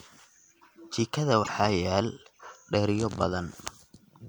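At 1.40 to 1.49 s the speech breaks into a brief glitch. This is damaged data in a compressed stream. Bytes in that stretch were corrupted, so the decoder misread those frames, lost sync and had to find the next valid frame header.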